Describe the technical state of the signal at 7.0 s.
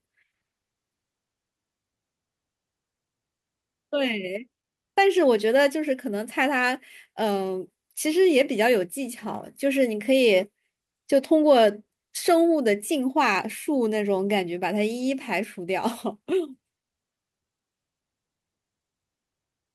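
At 7.0 s the speech signal is intact, with no audible fault at that moment.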